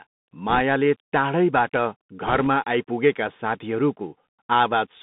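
The speech is thin and boxy, with nothing above about 3.7 kHz or below 150 Hz, scratchy s sounds, roughness on loud bright moments and a fine granular hiss under everything. That is the Bluetooth CVSD headset codec: each sample is a single up-or-down bit, which fits a 64 kbps link, and when the adaptive step can't keep pace with fast, loud high content, the waveform is smeared into that gritty texture.

From 0.49 to 0.62 s a brief rushing crackle rides over the speech, with no sharp clicks. These are bit errors on a Bluetooth voice link, with roughly a couple of percent of bits flipped. Because every CVSD bit nudges the waveform by only one step, sized to the current speech level, and the decoder recovers on its own, each wrong bit adds noise that grows with the speech level rather than a pop.

The same crackly rush returns from 2.27 to 2.47 s, longer but a touch lighter, with a somewhat smaller share of bits corrupted.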